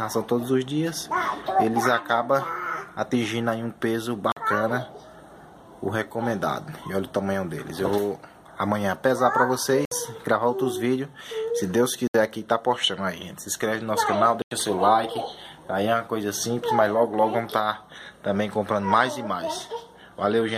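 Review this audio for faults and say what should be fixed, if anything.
Four blocks of digital silence cut into the audio: at 4.32 to 4.37 s (46 ms), 9.85 to 9.92 s (64 ms), 12.07 to 12.14 s (70 ms), and 14.42 to 14.51 s (93 ms). Each time, the signal drops straight to silence and returns with no fade. That leaves a short hole. The first and last gaps fit whole buffers of 2048 and 4096 samples. This points to output buffers that were not filled in time. To prevent it, give the audio thread more headroom or a larger buffer so every block is written before playback needs it.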